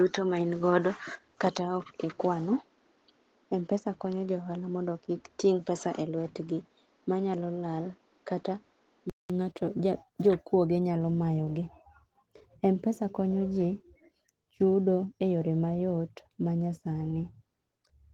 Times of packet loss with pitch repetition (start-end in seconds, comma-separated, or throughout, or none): none